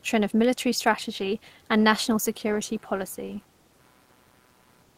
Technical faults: computer activity noise

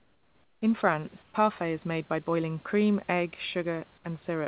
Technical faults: comfort noise in place of the background

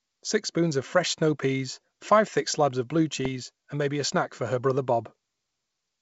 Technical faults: bit errors on an ADPCM link

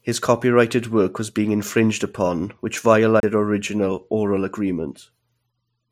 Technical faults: CD skip

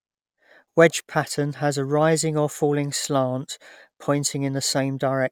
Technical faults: none

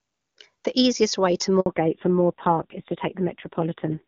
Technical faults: handover gap; fallback to narrowband

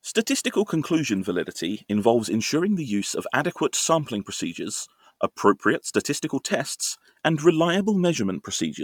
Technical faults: Bluetooth LC3 compression

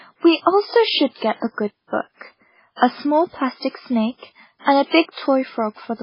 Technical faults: MP3 compression

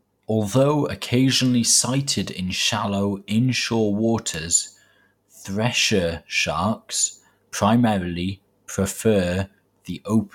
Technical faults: none

